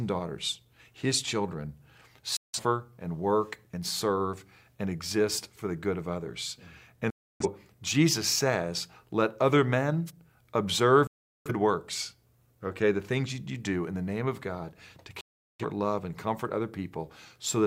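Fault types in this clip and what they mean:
Digital broadcast dropout: The receiver stops getting decodable frames and mutes until valid ones return. Here the sound cuts out with a roughly 3 ms fade at 2.37, 7.10, 11.07 and 15.21 s, leaving silent holes of 0.17 to 0.38 s. The missing programme never comes back.
Wireless microphone noise hit: The analogue FM radio link briefly fades when reflected signals cancel, so receiver noise rises over the wanted signal. In this clip it is a single short burst of static at 10.06 s, lasting about 50 ms.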